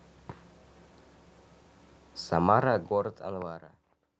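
No technical faults can be heard at any point in this speech recording.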